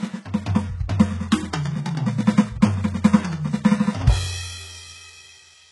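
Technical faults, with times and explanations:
Throughout: HE-AAC compression, likely, at a very low bitrate in the region of 12 kbps, with heavy damage to this music. Only the lower spectrum is truly coded. The treble is rebuilt by copying lower bands upward under a coarse envelope, so its harmonics fail to line up with the real ones. A spectrogram shows smeared, repeated-looking upper bands ending in a hard ceiling near 11.5 kHz.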